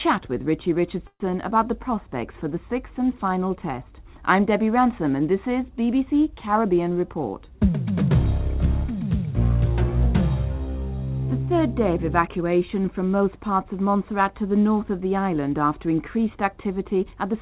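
From 1.07 to 1.32 s a call audio freeze stretches the last sound into a fading buzz for about 130 ms, then 50 ms of silence, likely from delayed packets. From 16.83 s to the end, a jitter buffer speed-up runs the sound 7% faster at unchanged pitch, trimming roughly 50 ms of pitch periods. The G.711 call path leaves nothing above 4 kHz.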